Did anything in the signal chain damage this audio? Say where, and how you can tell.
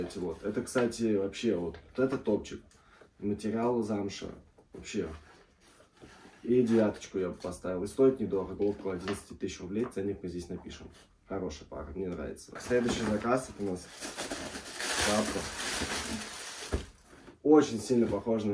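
No, nothing in the signal chain audibly damaged this audio.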